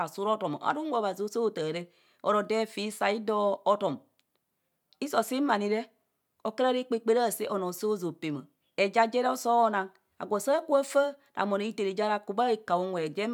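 No technical faults can be heard anywhere in the speech recording, and the signal stays steady and intact throughout.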